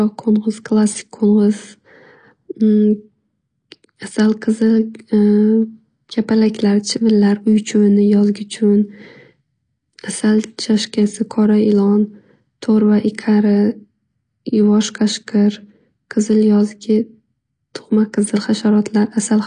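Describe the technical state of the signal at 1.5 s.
At 1.5 s the speech shows AAC compression damage, present across the whole clip rather than just this moment. Nothing sits above about 10 kHz, so the top octave is missing and the sound is dull. The encoder is likely AAC-LC running near 32 kbps, quantising each frame's spectral lines so coarsely that bands thin out or fill with substitute noise, which gives sibilants a fizzy, smeared edge and sustained sounds a plainly audible warble.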